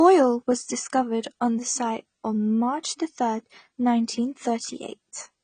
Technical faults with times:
0.00-5.43 AAC compression

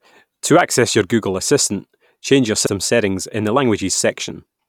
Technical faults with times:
2.63-2.69 damaged data in a compressed stream

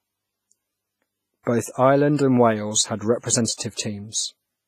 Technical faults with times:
0.00-4.68 WMA compression
1.43-1.47 pre-echo
3.54-3.79 pre-echo

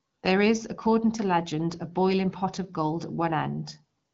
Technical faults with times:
none

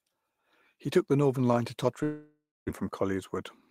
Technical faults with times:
2.03-2.71 long network dropout

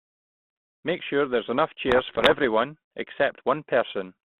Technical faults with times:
1.88-2.44 bit errors on an ADPCM link

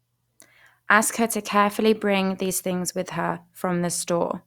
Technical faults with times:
none

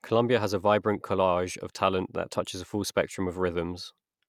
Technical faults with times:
none

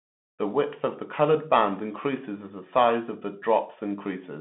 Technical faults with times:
0.00-4.41 Bluetooth CVSD headset codec

